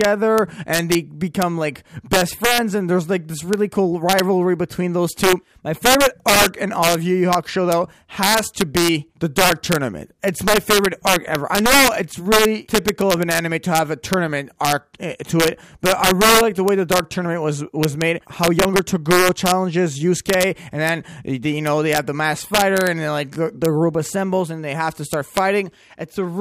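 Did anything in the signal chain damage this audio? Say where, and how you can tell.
Yes. Integer overflow at a fixed-point gain or sample-format conversion stage: loud peaks throughout, driven about 6 dB past full scale, wrap to the opposite sign and crack harshly. A small fraction of samples, under one percent, jump rail-to-rail on the waveform, showing as full-band vertical streaks on a spectrogram.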